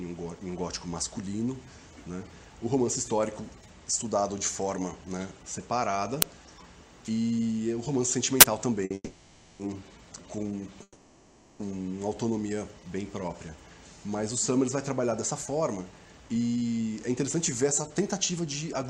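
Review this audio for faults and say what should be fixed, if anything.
Uninitialised buffer at 6.22 s and again from 8.41 to 8.43 s: each is a sudden, loud disturbance, a crack at 6.22 s and a burst of harsh digital noise in the longer one. A block went to the output before any audio had been written into it, so stale memory contents played as samples. The lengths, about 12 ms and 23 ms, fit a 512-sample and a 1024-sample buffer. Zero-fill every buffer on allocation, and never hand one to the output until it has been written.

Short stall from a late packet, 8.85 to 8.92 s: the sound is held for 50 ms with a slight buzzy sustain, then carries on from exactly where it stopped. A packet arrived late, the jitter buffer emptied, and the receiver stretched the last audio until the packet came. Nothing is lost, but the delay grows by 50 ms. Size the jitter buffer to cover normal arrival variation so one late packet doesn't drain it.

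Call audio freeze, 8.94 to 9.61 s and 10.83 to 11.62 s: the audio stops and the last sound is drawn out as a fading buzz for about 650 ms and then about 770 ms. Each ends with 30 to 40 ms of silence before resuming from the same point, with nothing skipped. The likely cause is packets held up in transit, leaving the jitter buffer empty while the receiver concealed the gap. Investigate the network path for bursts of delay, and use adaptive jitter buffering that reacts to sustained holdups.

Jitter buffer speed-up, 15.31 to 18.84 s: the sound runs about 9% fast at unchanged pitch and feels rushed. The receiver was trimming excess buffered audio by removing many short pitch-period slices in succession, about a third of a second in all, to bring latency back down. Spread the catch-up over a longer stretch, or cap the removal rate so the acceleration stays inaudible.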